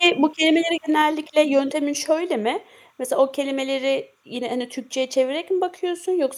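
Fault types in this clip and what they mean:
Timecode bleed: A faint chirping warble runs under the whole clip, sitting well below the speech, roughly 45 dB down. It sounds like linear timecode leaking in from a nearby track or cable. That code is a square wave that flips between pitches around 1 kHz and 2 kHz, and here it ticks along at 29.97 frames per second. It stays steady from start to finish, so you hear it most in the pauses.
Microphone overload: Right at the start, from about 0.05 to 0.08 s, the loudest peak gets its tops sheared off, overshooting the converter's ceiling by about 2 dB. Only a small fraction of the samples in that moment are flattened, but it's enough to give the onset a brief harsh, crackly edge. The likely cause is the mic input gain being set too hot, so the peaks slam into the converter's limit.
Microphone volume stepped down: At about 1.02 s everything, speech and background alike, drops abruptly by about 4 dB in a single step rather than fading. 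It comes shortly after that clipped peak at the start, and that sequence points to the likely cause: the call software registered the mic as too loud or clipping and cut the device's input volume in one jump. The level stays at that lower setting afterward.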